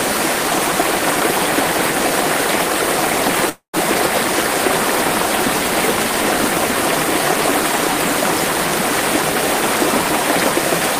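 A likely long network dropout begins at 3.49 s: the audio stream stopped arriving for roughly a quarter of a second, and the receiver had nothing real to play. It carried the last sound forward as a fading tail lasting about 240 ms, the last 110 ms or so of it thinned to near-silence, before the sound resumes at 3.75 s. About 240 ms of the original audio is gone, so the return jumps ahead rather than picking up where it broke off.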